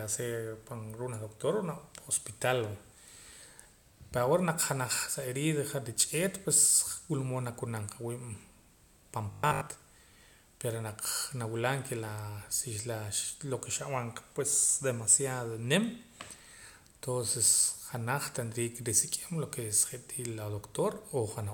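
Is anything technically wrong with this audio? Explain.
Yes. From 9.31 to 9.67 s there is robotic sound from repeated short buffers. Audio likely arrived too late, so a 20 ms fragment was looped through most of that stretch. It imposes a rigid 50 Hz metallic buzz, visible as harmonics spaced 50 Hz apart and a waveform shape recurring every 20 ms.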